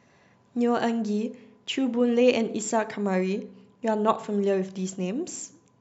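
No technical faults are audible.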